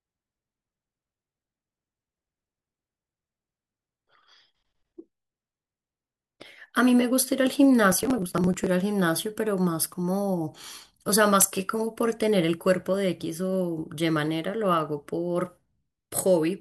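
Processor overload crackle runs from 7.92 to 8.67 s in this speech clip: the processor misses deadline after deadline on buffers of around 10 ms, skipping roughly thirty of them; each hard-edged gap tears the sound into gritty crackle until the load eases.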